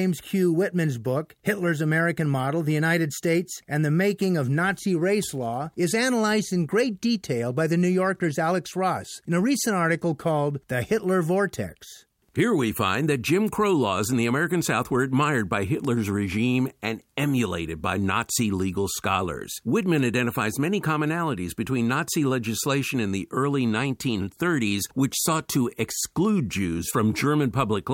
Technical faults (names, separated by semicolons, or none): none